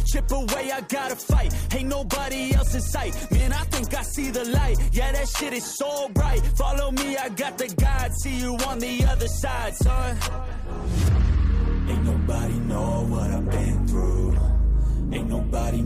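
No technical faults can be heard anywhere in the recording. Nothing in the audio calls for a time stamp or an explanation.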